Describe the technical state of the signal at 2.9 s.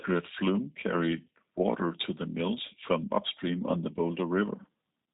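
At 2.9 s the speech carries G.729 codec damage, present across the whole recording. It is rebuilt from a vocal tract filter, a pitch predictor and a few pulses per frame, with nothing above 3.8 kHz. Unlike a plain low-pass, it sounds rough and synthetic as well as dull, which fits an 8 kbit/s stream.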